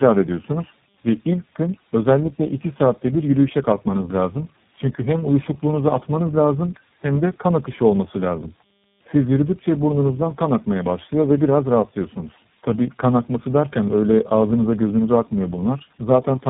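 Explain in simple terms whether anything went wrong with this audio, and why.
Tandem speech coding runs through the whole recording. The speech sounds like it passed through three different phone coders in a row, each re-squeezing the previous one's output. Nothing reaches above 3.8 kHz, and the speech is rougher, more muffled and more warbly than a single phone link would leave it.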